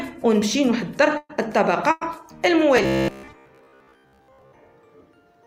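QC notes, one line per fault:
1.17–1.31 s and 1.91–2.03 s: burst of packet loss. About 120 ms and 100 ms of audio are missing, each bridged by a fading continuation of the last sound, with the first ending in about 30 ms of silence.
2.77–4.52 s: robotic sound from repeated short buffers. There is a rigid metallic buzz at 66.7 Hz, likely from a 15 ms buffer being looped while most of the real audio is skipped.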